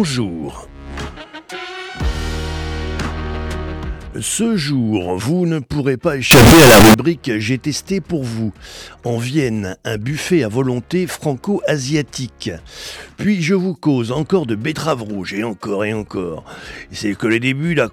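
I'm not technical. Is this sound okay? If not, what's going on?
No. From 6.31 to 6.94 seconds, the audio was likely stored as 32-bit floating-point numbers but read back as 32-bit whole numbers, a float read as integer fault. That turns the sound into a blast of very loud, harsh, buzzing noise.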